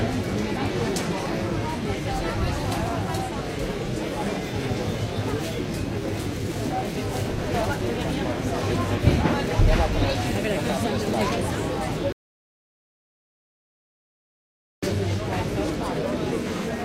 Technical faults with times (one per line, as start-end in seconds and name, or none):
12.12-14.83 rebuffering stall